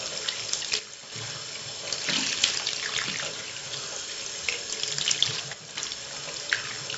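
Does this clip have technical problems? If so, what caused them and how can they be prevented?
Yes. The audio was stored with 4-bit ADPCM compression, which records each sample as a small coded step from a predicted value rather than the value itself. At 64 kbps the damage is heavy: a gritty hiss rides on every loud sound, sharp attacks distort where the step size can't grow quickly enough, and nothing remains above 7.7 kHz, which fits a sample rate around 16 kHz and leaves the sound dull. Keeping the material in a lossless or high-bitrate format at a full sample rate prevents this.

The level also dips twice, from 0.79 to 1.12 s and from 5.53 to 5.75 s, falling abruptly by about 6 dB before recovering. That is likely one channel dropping out, so that only half of a stereo pair reaches the mono mix. Anything unique to the missing side vanishes for those moments. Secure cabling and monitoring both channels during capture would prevent it.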